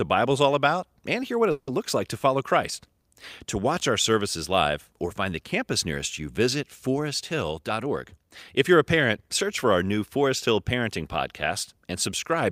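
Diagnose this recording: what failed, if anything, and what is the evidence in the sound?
At the network stage, a call audio freeze runs from 1.51 to 1.70 s. The last sound is stretched into a fading buzz or hiss for about 160 ms, then 30 ms of silence, and speech resumes where it stopped with nothing lost. Delayed packets likely drained the jitter buffer.

In the buffer stage, a jitter buffer speed-up runs from 7.68 to 10.18 s. Speech plays at about 106% speed with unchanged pitch and sounds hurried. The receiver trimmed short pitch-period pieces repeatedly, removing roughly 150 ms in total to shed the excess delay held in the buffer.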